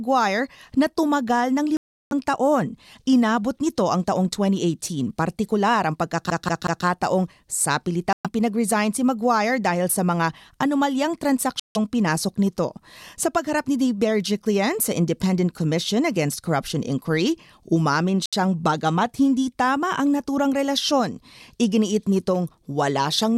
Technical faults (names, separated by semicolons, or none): Bluetooth stall; CD stuck on one turn